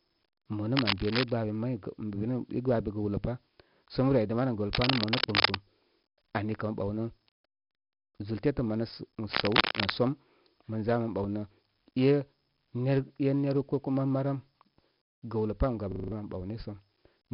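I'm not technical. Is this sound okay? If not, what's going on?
No. The whole clip has 4-bit ADPCM compression damage: gritty hiss riding on louder speech, harsh sharp sounds, and nothing above 5.3 kHz, so it sounds dull.

From 15.92 to 16.12 s, right after "gəwlə pam", a system hang loop repeats one 40 ms slice five times, a buzzy stutter replacing about a fifth of a second of speech.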